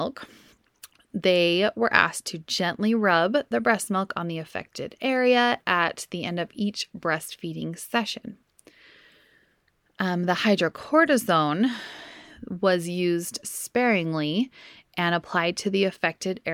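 No technical faults can be heard anywhere in this speech recording.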